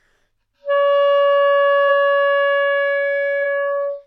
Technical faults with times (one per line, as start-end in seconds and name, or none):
1.88 compressed frames skipped